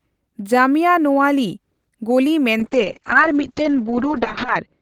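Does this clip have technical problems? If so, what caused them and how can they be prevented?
Yes. From 2.61 s to the end, the speech turns rough and muffled, with the top end gone. This is a call bitrate drop: the encoder fell from 32 kbps to 7 kbps, staying at its lowest for about 1.95 s, and bandwidth narrowed from 20 kHz to 8 kHz. Preventing it needs a steadier network path or a higher minimum bitrate floor in the call settings.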